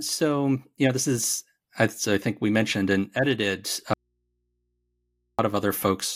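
An audio dropout to a faint residue runs from 3.93 s to 5.39 s. The speech cuts out abruptly and returns just as suddenly about 1.45 s later, with no fade at either edge. Through the gap only mains hum remains, roughly 50 dB below the speech level. The likely cause is the wanted signal being lost upstream while the path after the break stayed live, so the open input picked up hum instead of silence.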